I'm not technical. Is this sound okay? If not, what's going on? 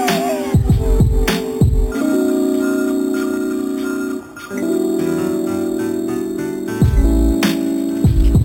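No. Throughout, there's imaging from sample-and-hold upsampling: a bright metallic fizz shadowing the sound, which points to each sample being repeated, likely from 8 kHz up to 48 kHz.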